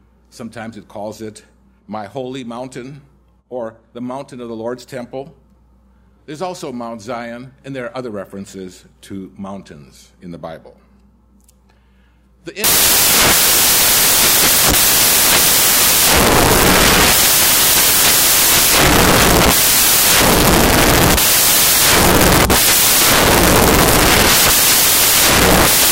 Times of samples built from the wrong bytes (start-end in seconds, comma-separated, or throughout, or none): 12.64-25.92